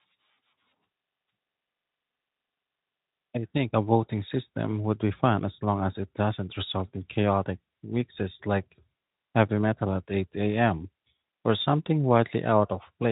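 Nothing stood out on listening to this speech clip.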